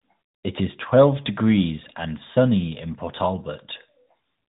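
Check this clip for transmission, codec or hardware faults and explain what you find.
There is one fault, and it runs through the whole clip: tandem speech coding. The speech was decoded and re-encoded twice, passing through CVSD, then G.711 mu-law, then AMR-NB at 12.2 kbit/s. Each coder builds on the previous one's errors. The result sounds rough, muffled and warbly, with nothing above 3.8 kHz.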